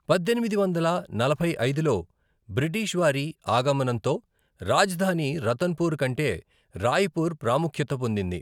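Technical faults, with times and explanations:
No technical faults can be heard in this speech recording. Nothing in the audio points to any breakdown in how it was captured or carried.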